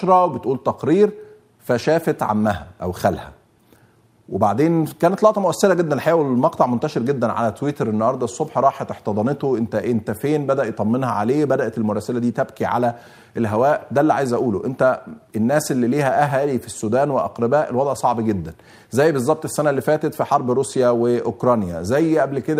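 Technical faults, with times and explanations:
No technical faults can be heard anywhere.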